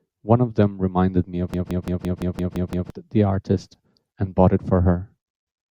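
From 1.54 to 2.90 s, a system hang loop repeats one 171 ms slice eight times, stuttering at 5.9 Hz. The driver froze while the sound hardware kept replaying its ring buffer.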